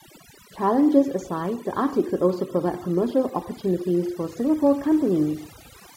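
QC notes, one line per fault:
Throughout: overdone noise removal. The noise reduction ran far too hard, pulling individual frequency bands down or out whenever they came near its noise estimate. The background drops and breaks up into twinkling specks, and the speech loses its quieter components as they get cut too.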